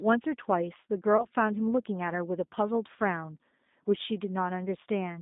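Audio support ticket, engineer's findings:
G.729 codec damage, whole clip. Speech sounds rough and synthetic. Band is limited to about 200 Hz to 3.7 kHz, with nothing above. Probable component: narrowband VoIP codec, which fits G.729A at 8 kbit/s. The decoder rebuilds each frame from a vocal tract filter and a few pulses. Fine detail is lost, and that roughness is plainly audible.

Packet loss concealed by the speech codec, 1.17 to 1.27 s. Brief smeared stretch, then a weak or distorted recovery. The sound points to one lost packet of about 20 ms. Probable component: decoder concealment. The decoder extends its last pitch and filter with falling gain. Later frames build on that guess, so damage lasts about 0.1 s.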